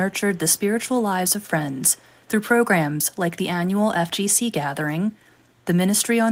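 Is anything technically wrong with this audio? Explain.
Yes. Echo leak in this speech, at 0.19 to 0.38 s, 0.55 to 0.60 s and 1.71 to 2.29 s: a faint copy trails the speech by 431 ms, very low in level, likely from a far-end loudspeaker whose echo canceller let some through.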